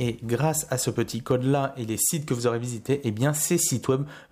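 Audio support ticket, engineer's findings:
No faults found on listening.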